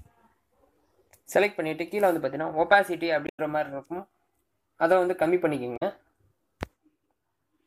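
At 3.25 s and again at 5.76 s, damaged data in a compressed stream breaks the sound with a brief glitch, lasting about 0.15 s the first time and 0.07 s the second. Corrupted bytes make the decoder misread those frames and lose sync until it locks onto a valid frame header. On a spectrogram each event shows as a short break in the surrounding pattern, and the waveform shows a segment that doesn't match the surrounding signal.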